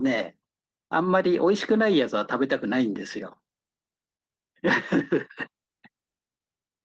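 Speech recording with no audible technical faults.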